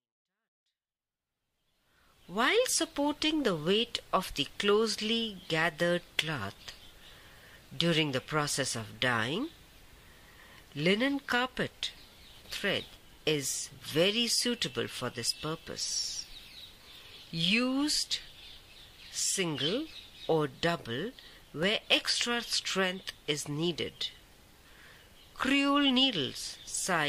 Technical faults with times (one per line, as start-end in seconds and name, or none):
21.63 block of digital silence